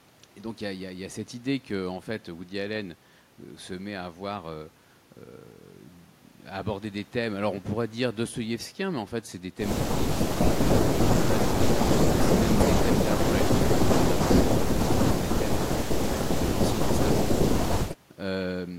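Nothing stood out as a problem on listening to this recording.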